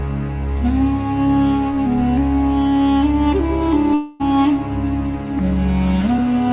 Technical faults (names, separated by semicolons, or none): long network dropout